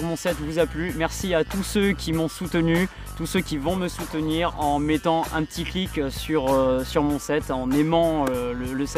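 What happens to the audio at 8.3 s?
Nothing goes wrong at 8.3 s; the audio plays through that moment intact, with no dropout, click or distortion.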